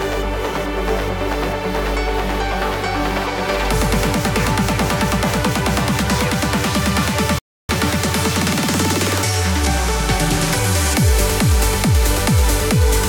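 At 7.39 s the sound cuts out for about 0.31 s, until 7.69 s. This playback stall likely came from the player running short of data.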